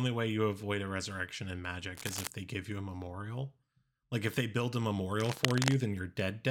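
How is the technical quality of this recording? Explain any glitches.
The speech is marred by two bursts of cable scratch noise, from 1.95 to 2.27 s at about 10 dB below the speech, and from 5.20 to 5.75 s at roughly the speech's own level. Both are dense, uneven scratching, likely from a worn connector whose contact resistance fluctuated as it moved.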